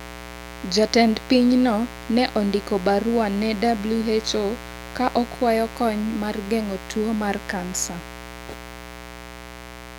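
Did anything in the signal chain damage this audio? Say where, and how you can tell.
Yes, mains buzz in the analogue wiring throughout the speech: a raspy 60 Hz buzz about 15 dB below the signal, from switching spikes 120 times a second.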